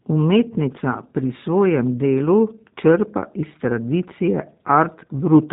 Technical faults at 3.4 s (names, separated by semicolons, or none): G.729 codec